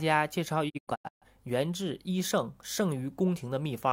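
Between 0.68 s and 1.27 s the speech falls into several short silent holes, each entered through a quick 20 ms fade. The longest lasts 128 ms, and about 0.34 s is lost in all. This digital broadcast dropout comes from the receiver muting while frames failed their checks.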